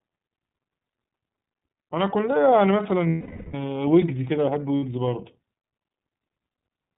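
Throughout, the speech sounds narrowband, slightly rough and synthetic, with nothing above 4 kHz and plainly audible coding damage. This is the iLBC codec, coding each frame independently; the texture fits its 13.33 kbps mode with 30 ms frames.

From 3.10 to 3.55 s, about 450 ms, the sound freezes into a held, buzzy vowel that fades, and again briefly from 4.78 to 4.83 s. These are lost iLBC frames: the decoder repeats the last pitch cycle mixed with noise, recovering cleanly immediately afterwards.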